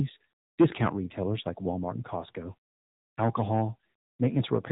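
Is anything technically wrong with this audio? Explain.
Yes. Throughout the speech, AMR narrowband mobile codec damage is plainly audible: the 7.4 kbps AMR-NB coder rebuilds each 20 ms frame from a vocal-tract model excited by sparse pulses, and 8 kHz sampling removes everything above 4 kHz, leaving a muffled, buzzy, synthetic voice.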